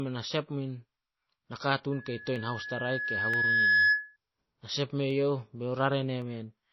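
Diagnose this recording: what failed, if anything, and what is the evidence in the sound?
Codec stage: the speech sounds watery throughout and the treble is cut off. This is likely MP3 compression at a low bitrate, roughly 24 kbps, starving the treble.

Acoustic loop between playback and microphone: a loudspeaker feedback squeal at 1.7 kHz runs from 1.92 to 4.17 s. It builds over about two seconds to roughly 10 dB above the speech.

Driver or buffer stage: single sharp clicks at 2.36, 3.34, 5.11 and 6.22 s. These are likely dropped samples, each gap a small fraction of a millisecond, jumping the waveform.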